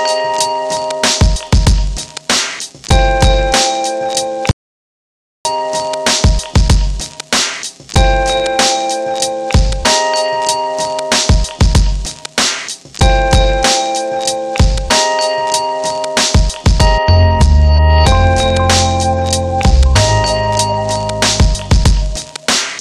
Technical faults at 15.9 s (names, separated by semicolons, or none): none